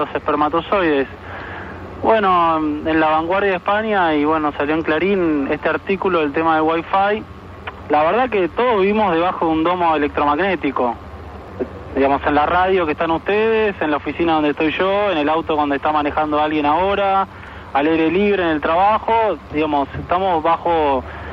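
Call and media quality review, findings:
Overlap between stream segments: overlapping timestamps at 6 s segment boundaries; player trims 4 to 14 ms of real audio, waveform jumps. Clicks or tiny skips at 5.49, 11.48, 17.47 s.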